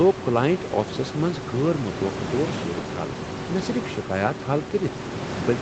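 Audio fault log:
No faults detected.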